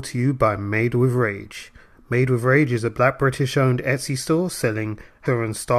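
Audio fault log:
5.25 s, damaged data in the compressed stream: a brief glitch breaks into the speech for about 16 ms. Corrupted bytes in the encoded stream made the decoder misread a frame, lose sync and search for the next valid frame header before playback resumed.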